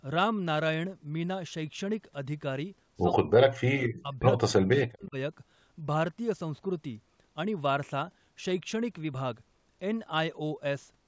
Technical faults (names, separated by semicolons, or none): speech suppressed in double talk